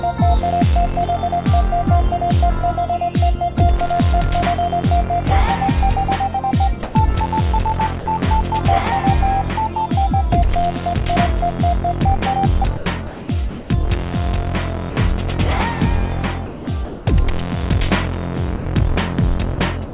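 The sender's voice detector, likely misjudging quiet sound as background, stops transmitting at 6.83 to 6.95 s and 8.00 to 8.06 s, and comfort noise fills each gap. These are cases of sound dropped by the voice detector: about 120 ms and 60 ms of sound give way to a smooth, steady hiss, then the real signal resumes when the detector retriggers.

Between 12.77 and 13.70 s the detector likely toggles repeatedly, so the sound is chopped by the voice detector. Roughly half a second in total is replaced by synthetic noise. The same choppy switching returns from 16.46 to 17.06 s, replacing about 0.4 s.

Further short dropouts of the same kind fall at 14.90 to 14.96 s, 18.56 to 18.65 s, 19.55 to 19.58 s, and from 19.85 s to the end. Each is a brief flat patch of comfort noise. All of this sits on a band-limited call sound with nothing above 4 kHz, which fits G.711 at 64 kbps.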